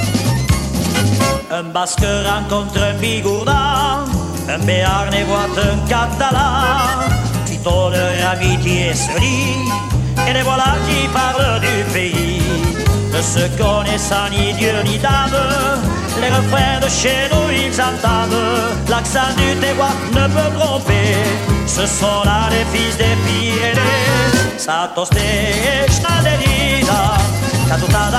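Compressed frames skipped at 3.93, 7.46, 18.74, 21.23, 23.76 and 26.03 s: the decoder lost roughly 150 ms of audio each time (about 200 ms at 18.74 s), fitting around seven 23.2 ms frames, so the audio jumps ahead.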